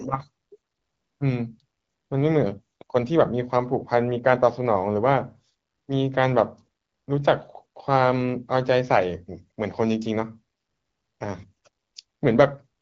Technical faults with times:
none

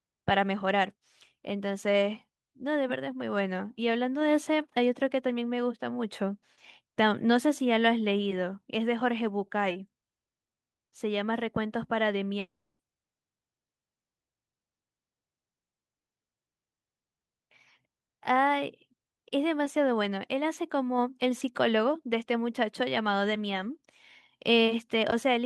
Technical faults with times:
12.39-12.81 long network dropout

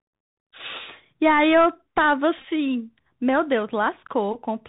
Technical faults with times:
0.00-4.68 Bluetooth CVSD headset codec
2.38-2.44 Bluetooth headset packet repeated

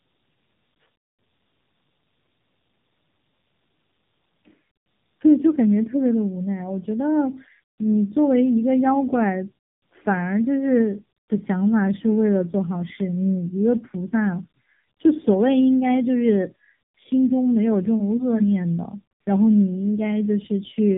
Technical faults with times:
0.00-20.98 tandem speech coding

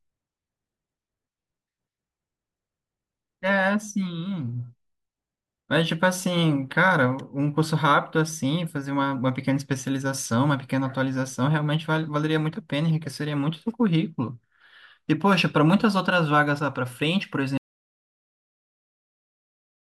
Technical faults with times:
17.57-19.87 audio dropout to silence

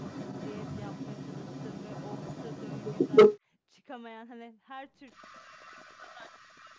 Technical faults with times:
0.00-3.40 echo leak
5.06-6.79 echo leak
5.28-6.77 speech suppressed in double talk

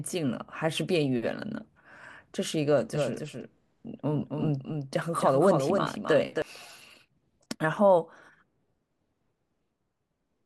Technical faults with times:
2.94-6.42 doubled audio track

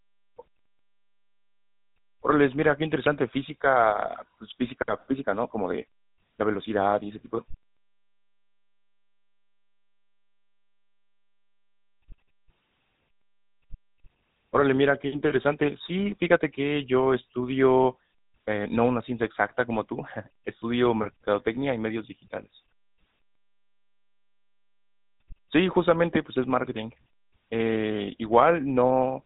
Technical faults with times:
0.00-29.25 GSM full-rate codec

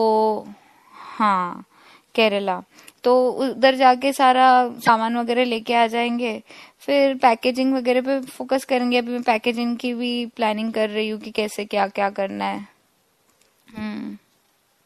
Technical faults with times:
0.00-14.85 MP3 compression
4.85-4.89 damaged data in a compressed stream
12.55-12.60 damaged data in a compressed stream

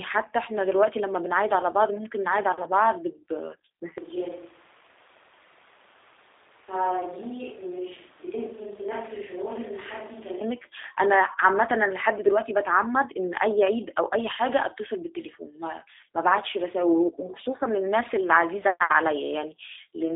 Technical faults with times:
0.00-20.16 G.729 codec
3.98-10.41 switch to a distant microphone

